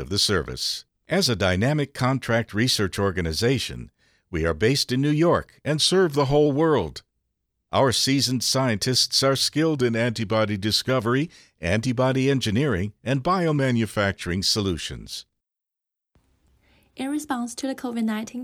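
At 5.78 to 6.46 s, 9.76 to 10.89 s and 13.58 to 14.13 s, the speech slows by 6.2% and drops 111 cents, just over a semitone. Then it snaps back. This is likely a drift correction step. Clock-matching software briefly cut the playback rate to rebalance its buffer.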